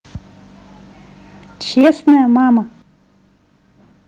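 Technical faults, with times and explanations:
1.77 to 2.36 s, microphone overload. The loudest syllables sound harsh and crackly, with a gritty edge on each peak. The likely cause is an input volume set too high, driving the signal about 6 dB past the converter's limit. The tops of the waveform are sliced flat, and roughly a tenth of the samples in this stretch are clipped. Those flattened peaks add sharp distortion that the original sound never had.
1.81 s and 2.82 s, microphone volume stepped down. The level drops suddenly twice, by about 3 dB and then by about 9 dB. Both the speech and the background fall together, with no fade. This is likely the call software reacting to the overloaded peaks and cutting the device's input volume in single steps. The first step lands inside the distorted stretch. The second, larger one leaves the rest of the clip clearly quieter.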